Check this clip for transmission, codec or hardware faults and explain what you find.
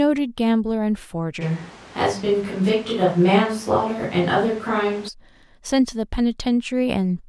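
One fault is present: a switch to a distant microphone between 1.43 and 5.07 s. The speech turns suddenly roomy and hollow with thinner bass while the level holds roughly steady, and background noise rises to around 20 dB below the speech. The close microphone's signal likely dropped out, leaving a farther pickup. On a spectrogram, the low end weakens, reverberant tails smear between syllables, and the noise floor lifts. The waveform's pauses fill in, with abrupt boundaries at both ends.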